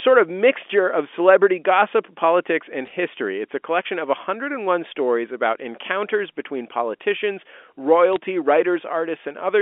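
Bit errors on a digital phone line flipped bits in the G.711 A-law stream during two short bursts, from 2.86 to 2.93 s right after "celebrity gossip politics and", and from 8.13 to 8.16 s, at a rate of a few tenths of a percent. Each corrupted byte decodes to one wrong sample, and those hitting the sign or top bits jump far from the waveform, so each burst sounds like a brief patch of sharp ticks and crackle laid over the band-limited telephone speech.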